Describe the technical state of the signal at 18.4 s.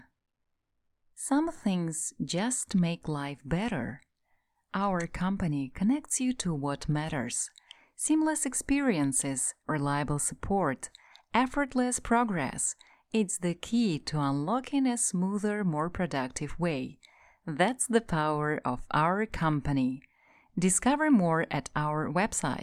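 At 18.4 s the signal is intact, with no technical fault audible at that moment.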